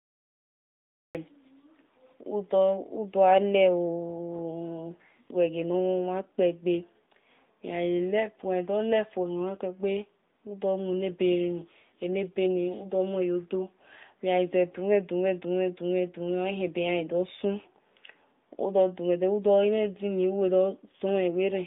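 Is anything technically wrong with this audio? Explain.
Yes. Throughout, the speech carries AMR narrowband mobile codec damage, which fits a bitrate near 10.2 kbps. Each 20 ms frame is rebuilt from a vocal-tract model with few pulses, so the voice sounds buzzy and synthetic. A spectrogram shows nothing above 3.8 kHz.

There is also a cut-off start. The first 1.15 s is digital silence, then the speech begins abruptly mid-sound with no attack. The waveform shows a flat line ending in a sudden edge.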